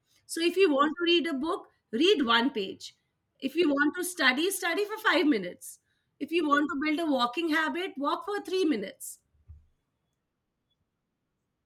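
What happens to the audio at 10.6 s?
Nothing goes wrong at 10.6 s; the speech plays through that moment intact, with no dropout, click or distortion.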